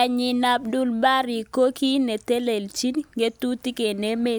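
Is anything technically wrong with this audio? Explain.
No, nothing technically wrong can be heard in this speech clip. No technical fault turns up anywhere in the recording.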